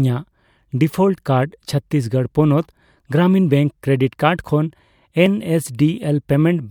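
At 5.26 s, just after "ᱠᱨᱮᱰᱤᱴ ᱠᱟᱨᱰ ᱠᱷᱚᱱ", the sound jumps ahead at a dropped buffer (overrun), likely losing a few milliseconds. The waveform jumps abruptly, and the spectrogram shows a thin vertical streak.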